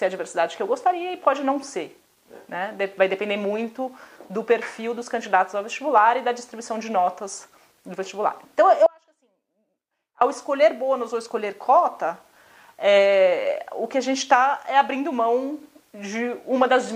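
An audio dropout to a faint residue runs from 8.86 to 10.21 s, about 1.35 s, where the signal cuts out abruptly and only a faint trace around 30 dB down remains, likely from a brief signal loss upstream. The waveform shows a sudden narrow band, and the spectrogram a dim, near-empty block with sharp edges.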